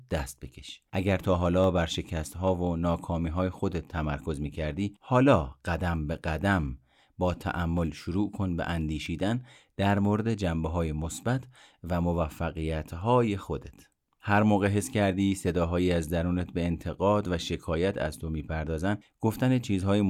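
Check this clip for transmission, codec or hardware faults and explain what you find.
Four isolated clicks interrupt the speech at 1.64, 9.06, 9.98 and 11.17 s. Each is a single sharp tick, most likely from dropped samples: a tiny fraction of a millisecond goes missing, so the waveform jumps abruptly to a later value. On a spectrogram each shows as a thin vertical line.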